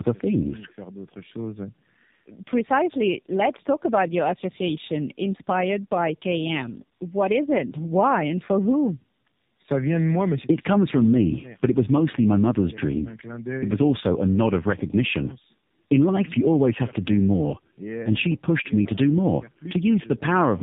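Throughout, the speech carries tandem speech coding. It sounds as if it passed through two low-rate speech coders in a row, which fits G.729A followed by AMR-NB, with the second coder re-encoding the first's damaged output. Nothing remains above 3.8 kHz, and the speech sounds rough, muffled and warbly.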